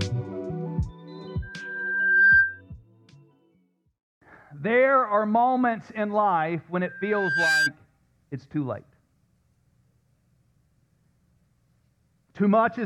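The audio is interrupted twice by loudspeaker feedback squeal, a single tone near 1.6 kHz. It appears from 1.42 to 2.61 s and again from 6.85 to 7.72 s. Each time it swells up in under a second. The first peaks about 10 dB above the rest of the audio, the second about 5 dB. A microphone is hearing the loudspeaker it drives. At 1.6 kHz the loop gain passes one, so that tone feeds on itself until the loop is broken.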